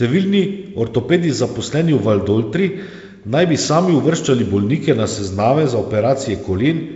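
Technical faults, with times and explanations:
Nothing stood out on listening to this speech, which comes through G.722 wideband telephone coding at what sounds like 56 kbit/s.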